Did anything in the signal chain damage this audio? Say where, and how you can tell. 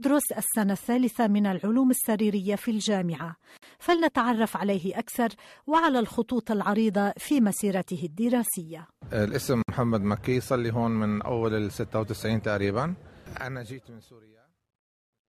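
Yes, there's a gap at a join of encoded pieces, at the codec stage: the sound drops out at 3.57 s for about 52 ms and at 9.62 s for about 60 ms, six seconds apart, then resumes where it stopped. Separately encoded segments were butted together untrimmed, leaving encoder delay and last-frame padding in.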